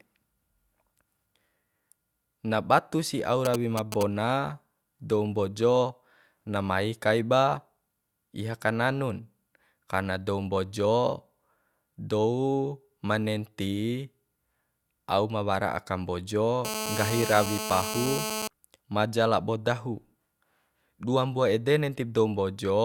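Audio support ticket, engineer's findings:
GSM signalling bursts, 3.45 to 4.03 s, right after "na batu si au". Galloping dit-dit-dit of short 217 Hz buzzes, a few dB under the speech. A 2G handset nearby is doing idle signalling, and the audio circuit is rectifying the RF pulses.

GSM phone buzz, 16.65 to 18.48 s, between "aka mbojo" and "maja labo dahu". Hard, raspy 217 Hz buzz, harmonic-rich, about 5 dB below the speech, nearly steady. A phone is on an active call, and its 217-per-second TDMA bursts are being demodulated by the audio front end.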